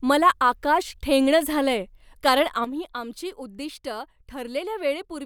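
A sudden gain jump at 2.65 s, right after "आकाश ठेंगणं झालंय कारण", drops this speech recording by about 9 dB, and it stays lower to the end. The speech and background noise fall together in a single step, likely from a digital gain setting applied between samples without a ramp.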